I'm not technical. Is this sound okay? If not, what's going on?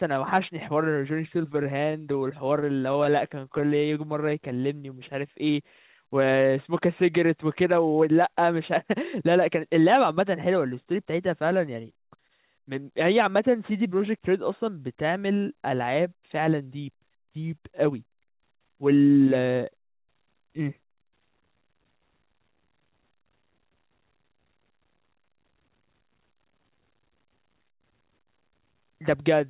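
No. The speech passes through a phone-style call connection, which removes everything above 4 kHz, so it has a narrow telephone tone. Three kinds of fault also affect it.

Scattered short gaps appear from 1.38 to 3.89 s. About fifteen tiny bits of sound went missing, each roughly 15 ms or less. Each time, the receiving end covered the hole by briefly stretching whatever sound came just before. You hear small ticks or little smears sprinkled through otherwise clear speech. This differs from the slow-down and speed-up below because it doesn't change the pace. It is a string of separate tiny blips.

Jitter buffer slow-down happens from 3.28 to 5.34 s and again from 13.32 to 14.00 s. The receiver was running short of stored audio, so it padded time by repeating tiny slices of the sound over and over. Playback drops to about 93% and 92% of normal pace. That adds about 0.16 s in the first stretch and about 0.06 s in the second. 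The speech drags slightly, but the pitch stays the same, so it doesn't sound deeper, only drawn out.

Jitter buffer speed-up is the reverse, at 7.43 to 9.39 s and at 15.99 to 16.62 s. Too much audio had piled up waiting, so the receiver trimmed out tiny slices to catch up. Playback runs at about 108% of normal, removing roughly 0.15 s and 0.05 s. The talking sounds a little hurried at unchanged pitch. This differs from the gaps, which leave blips rather than a steady rush.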